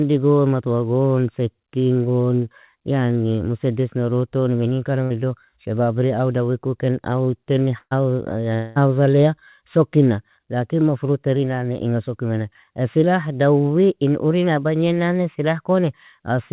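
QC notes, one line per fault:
5.04–5.12 s and 7.78–7.93 s, burst of packet loss. At 5.04 s about 60 ms of audio is missing. The receiver stretches the last sound to cover the gap, and it fades. At 7.78 s, right after "ku ken aw ten", about 140 ms is lost. About 130 ms is covered by a fading held sound, then about 40 ms of silence. Speech resumes further on.
8.55–8.78 s, long network dropout. About 200 ms of speech is gone. A fading continuation of the previous sound fills the whole gap, with no true silence. Speech then picks up past the missing part. A stall in incoming audio is the likely cause.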